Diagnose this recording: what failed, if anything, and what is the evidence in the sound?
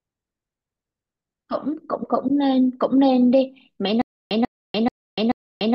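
Stutter with silent gaps from 4.02 s to the end: the speech freezes into a 141 ms fragment that repeats four times, each followed by 293 ms of digital silence, a steady 434 ms cycle. This likely reflects a stalled playback or stream buffer replaying its last block at each retry, with the speech from that stretch lost.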